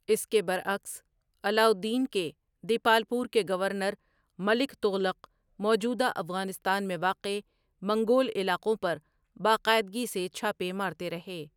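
No dropouts, clicks, distortion or level jumps turn up anywhere in this speech recording; the signal runs continuously from first sample to last with nothing to flag.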